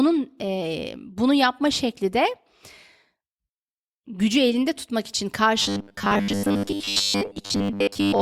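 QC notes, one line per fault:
5.62–8.21 s, robotic sound from repeated short buffers: right after "gücü elinde tutmak için" the speech collapses into a stiff metallic buzz at about 100 Hz that only loosely tracks the syllables through to the end. The likely cause is audio arriving too slowly, so the playback side keeps looping the most recent 10 ms chunk while fresh material is dropped. Most of the sound in this stretch is repeated, and that fixed loop length imposes the 100 Hz pitch.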